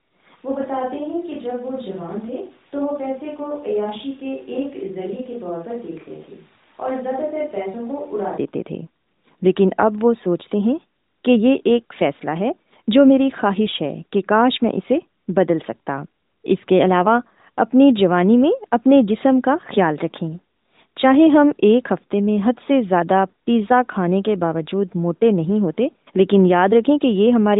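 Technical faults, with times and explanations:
0.37 to 8.37 s, switch to a distant microphone: the speech suddenly goes roomy and hollow, thinner in the low end, roughly 10 dB quieter, with room noise sitting only about 25 dB under it, then snaps back to close and full. That's most likely the close mic dropping out and a far-off one, such as a camera mic, carrying the sound for those eight seconds. The narrowband phone-codec ceiling near 3.8 kHz stays the same on both sides of the switch.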